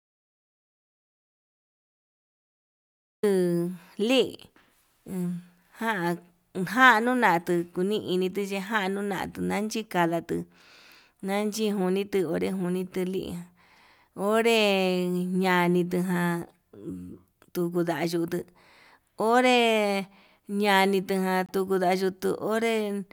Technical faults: audio dropout to silence; corrupt frame decoded

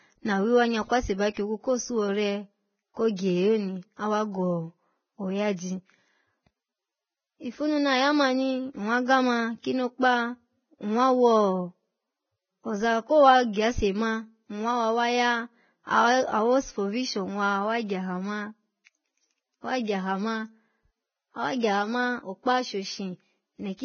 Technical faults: Vorbis compression

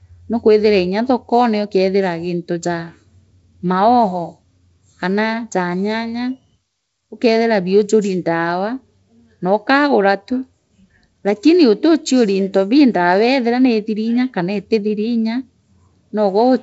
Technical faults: none

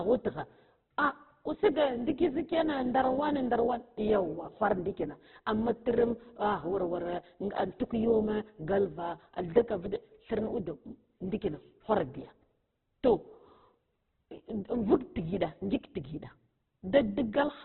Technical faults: Opus compression

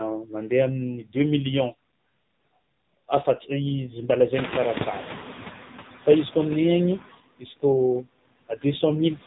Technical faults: noise suppressor artifacts; AMR narrowband mobile codec; speech cut by the noise suppressor

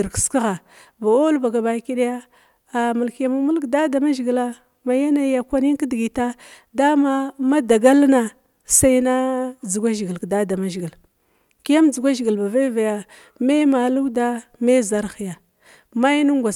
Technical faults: none

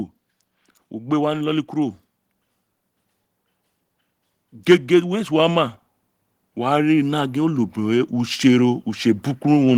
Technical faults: automatic gain rising

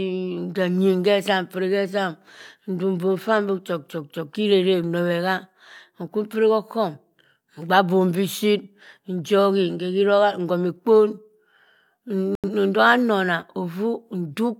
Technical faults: digital broadcast dropout

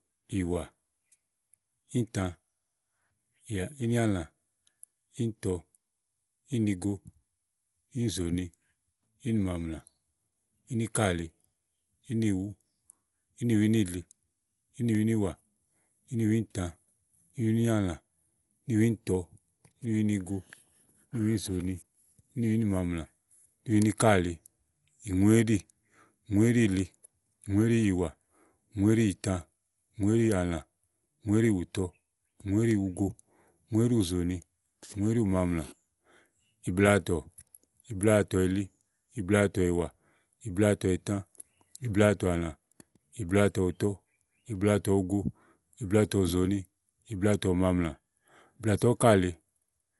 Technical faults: Dolby Digital compression

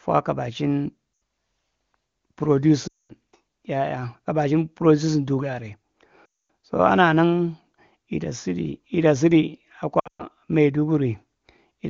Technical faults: lost AMR speech frames

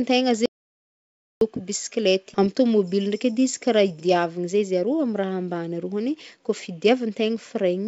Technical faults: audio dropout to silence; skip ahead

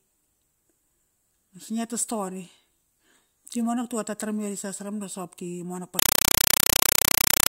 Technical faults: compressed stream played as audio

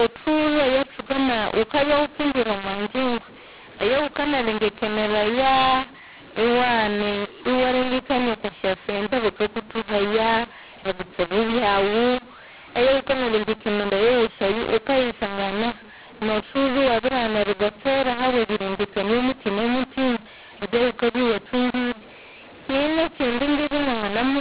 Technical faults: mu-law and A-law mixed up

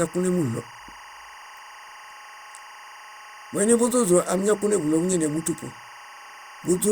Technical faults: timecode bleed

